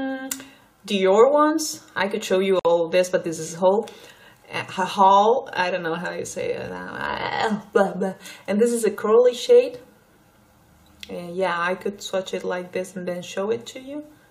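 At 2.59 s, a gap at a join of encoded pieces: a gap of about 55 ms, from untrimmed encoder delay and padding, cuts the sound with smeared edges before it resumes.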